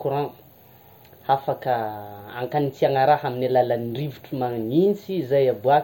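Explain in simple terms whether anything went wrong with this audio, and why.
Nothing went wrong with this speech recording. Listening through it, there is no point where the sound breaks, jumps or is damaged.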